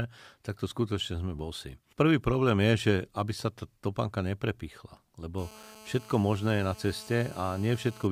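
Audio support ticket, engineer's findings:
GSM phone buzz, 5.38 to 8.07 s, starting right after "sa tá topánka neprepichla". Hard, raspy buzz at 217 Hz with dense harmonics, unrelated to the speech, about 23 dB below signal. Steady throughout, consistent with a 2G handset in an active call near the input stage. Probable component: mic preamp, which rectifies the TDMA radio bursts into audio. Check shielding and RF filtering at the input.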